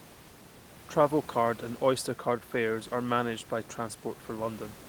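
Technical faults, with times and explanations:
No technical faults detected; the only background is the room's own noise, sitting about 19 dB below the speech.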